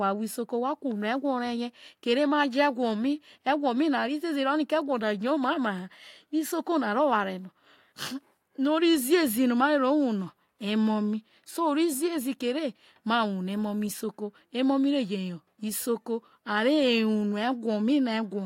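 A short recording of speech, with no technical fault to be heard anywhere in it. There is nothing here that needs a time stamp or an explanation of cause.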